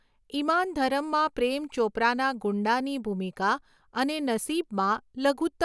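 No technical faults are audible anywhere in the recording.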